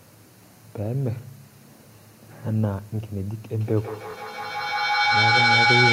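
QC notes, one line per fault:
3.61–5.93 s, feedback echo between two devices: the sound comes back roughly every 150 ms, and the repeats build up instead of fading, peaking about 5 dB above the speech, as a second device replays and recaptures the audio. A spectrogram shows evenly spaced, stacking copies.
4.11–4.15 s, Bluetooth stutter: a slice of about 23 ms plays twice because the receiver replayed its last buffer when data arrived late or was lost, which fits one dropped frame. The waveform shows an identical repeated segment, then the sound resumes slightly further on.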